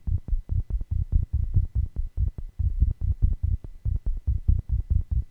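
No technical faults are audible.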